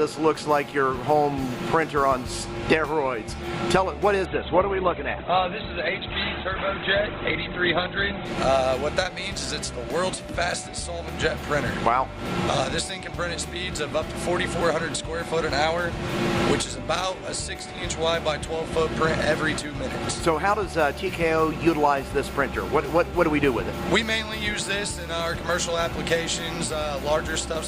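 From 4.25 to 8.25 s the audio suddenly turns dull, with nothing above about 4.3 kHz, then snaps back with no gap. That is an adaptive stream at a lower bitrate, consistent with Opus dropping from about 64 to 12 kbit/s.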